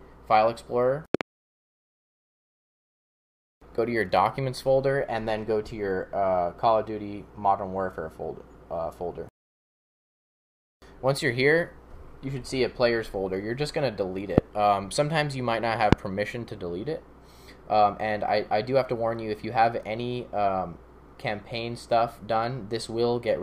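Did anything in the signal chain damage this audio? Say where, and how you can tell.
Yes. A voltage step, likely from a plug, switch or static discharge in the analogue wiring, was added to the signal, producing loud pops: a double pop at 1.15–1.23 s about 20 dB above the sound, then single pops at 14.38–14.40 s and 15.93–15.95 s, each about 25 dB above it.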